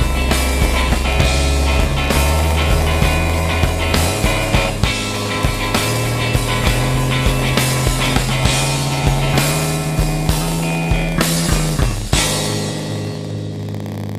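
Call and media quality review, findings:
Steady buzz at about 86 Hz throughout, audio running slow at 0.938x with pitch roughly normal. Block size mismatch (padded) between pipeline stages: short writes zero-filled to the reader's block, which fits a 512-sample buffer, inserting a gap each block.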